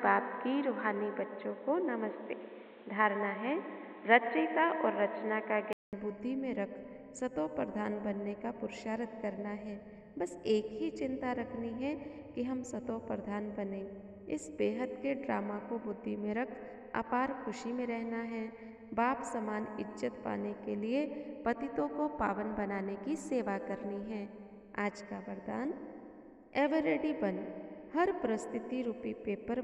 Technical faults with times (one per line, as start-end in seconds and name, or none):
0.00-5.93 input switched to a poorer device